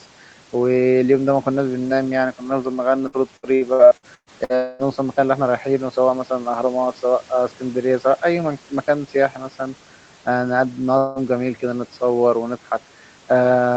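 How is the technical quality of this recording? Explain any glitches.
The recording has audible network glitches in two places, heard over a call path whose audio stops at about 8 kHz.

Repeated packet loss (robotic sound) runs from 3.07 to 4.52 s. Eight gaps, the longest 117 ms, were patched by extending the preceding sound, covering about a third of that stretch. The result is choppy speech with fragments missing.

A long network dropout is the likely cause of two further breaks, at 4.55 to 4.87 s and 10.98 to 11.19 s. About 240 ms and 180 ms are lost, each replaced by a fading buzz or hiss continuing the last sound rather than silence, before normal audio resumes.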